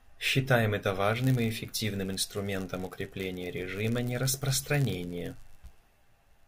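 From 1.12 s to the end, the speech carries a block size mismatch (padded). One stage writes slightly shorter blocks than the next reads. Zeros fill each gap. This gives a buzz near 99.6 Hz. Timing stretches to 0.996 of normal speed.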